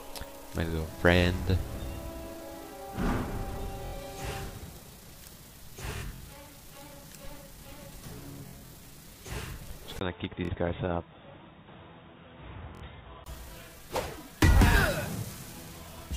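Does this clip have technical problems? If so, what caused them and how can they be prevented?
Yes. Bluetooth stutter occurs five times: 3.86 to 3.93 s, 5.97 to 6.22 s, 8.48 to 8.72 s, 10.45 to 10.51 s and 12.75 to 12.83 s. When wireless packets arrived late or not at all, the receiver kept replaying its last short slice, producing a brief buzzing repeat. The sound then jumps ahead rather than picking up where it stopped. In the 5.97 s and 8.48 s events the gaps are scattered over about a quarter second, with the longest run about 46 ms. The pieces fit slices of roughly 23 ms. A plain dropout would leave silence, and a click would be a single tick, but this fault repeats. Keeping the transmitter close, with a clear line of sight and away from busy 2.4 GHz traffic, prevents it.

From 9.99 to 13.26 s the sound turns dull and boxy. Nothing is present above 3.8 kHz, the level falls a few decibels, and a new faint noise floor appears. 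A 20 ms silence at 9.99 s marks the point where it changes. This is likely the input switching to a poorer device, such as a headset's call profile. An EQ or filter change would not bring its own noise and a gap at the switch. Locking the recording input to one microphone and disabling automatic device switching prevents it.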